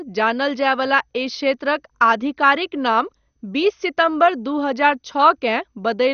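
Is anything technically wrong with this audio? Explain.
Yes. Throughout the speech there is MP2 compression damage, plainly audible: the sound is dull, with a gurgling, granular roughness. The likely cause is an MPEG Layer II encoder starved of bits, a rate that fits about 48 kbps. The codec divides the spectrum into 32 sub-bands and drops the upper ones entirely, coarsely quantising what remains. A spectrogram shows nothing above 6.5 kHz, a hard ceiling, with blocky, flickering patches below it; the waveform looks largely normal.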